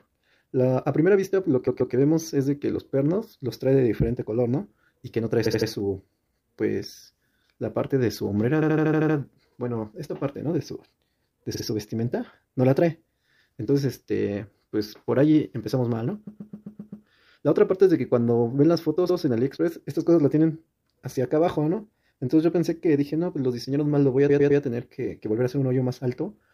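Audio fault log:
1.66 to 24.60 s, repeated frames at 1.66, 5.45, 8.61, 11.54, 16.26, 19.09 and 24.28 s: short runs of compressed frames were delivered more than once, so the decoder replays blocks of 52.2 to 130.6 ms, which points to frames of about 26 ms. Each block loops one to seven extra times, heard as a stutter. The worst are at 8.61 to 9.16 s and 16.26 to 17.05 s. Together they stretch the audio by about 2.4 s.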